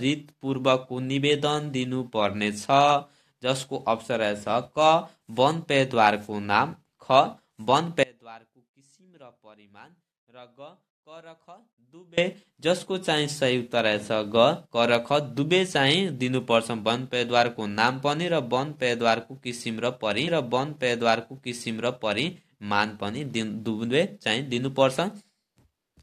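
At 8.03 s the sound drops abruptly to a faint residue, roughly 25 dB below its normal level, and stays there for about 4.1 s before snapping back at 12.18 s. The edges are hard cuts, not a pause or a fade, and the gap still carries that faint sound. This is an audio dropout to a faint residue: the likely cause is the wanted signal being lost while the path after the break stayed live, so only a faint sound remained.

From 20.27 s to 22.27 s about 2.0 s of material plays a second time, entered with a small blip where the playback jumps back. The listener hears the same passage again, and the clip runs that much longer than its content. This is a stream segment repeated: the player fetched or queued the same chunk of the stream twice and played both copies back to back.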